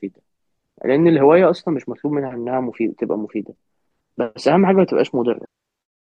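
Speech, with damaged data in the compressed stream near the end: corrupted bytes make the decoder misread frames and hunt for sync, producing a brief glitch from 5.42 to 5.45 s.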